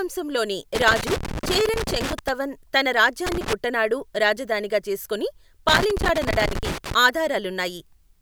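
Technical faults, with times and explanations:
0.75–2.29 s, 3.27–3.53 s and 5.68–6.94 s: loose connector crackle. Three irregular bursts of scratchy crackle, lasting about 1.5 s, 0.3 s and 1.3 s, break up the speech. A worn or dirty contact in the signal path is making and breaking rapidly as it moves. Each break chops the audio into fragments, and any DC offset on the line turns each reconnection into a pop. The result is an uneven, gritty scratching rather than a steady tone.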